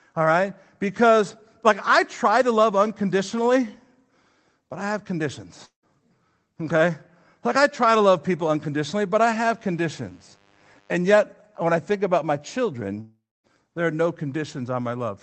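At 5.65 s the speech breaks into a fading, buzzy continuation of the last sound, which thins to near silence before the talk resumes at 5.85 s with a short piece gone. This is a long network dropout: the receiver got no audio for roughly 0.18 s, likely from packets lost on the call link, and filled the gap with decaying concealment rather than the real signal.

From 9.49 s to 10.99 s a steady, raspy buzz sits under the speech, around 35 dB below it. This mains buzz comes from sharp switching spikes at twice the 50 Hz mains rate. Its harmonics spread up through the kilohertz range, which gives it a gritty edge rather than a pure hum. A dimmer, rectifier or unshielded lead feeding those spikes into the chain would produce exactly this sound.

A second, longer dropout runs from 13.0 s to 13.46 s. The concealed tail carries on for about 0.43 s, fading in its last quarter-second or so to near silence. 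The speech returns without the missing 0.44 s. The high end across the clip stops near 8 kHz, which fits the wideband Opus call path it travelled through.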